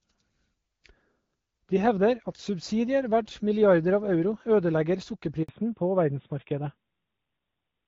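Speech call where a handover gap at 5.43 s drops the audio to silence for 60 ms, as the network switch delivers no speech frames. From 5.49 s on you've got a fallback to narrowband: everything above 4 kHz disappears and the voice goes duller and rougher, which fits a switch from HD Voice at 12.65 kbit/s down to a narrowband codec around 12.2 kbit/s.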